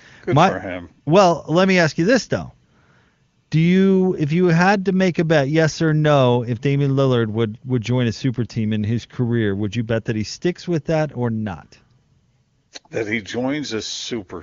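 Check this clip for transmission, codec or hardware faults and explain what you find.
No faults found here.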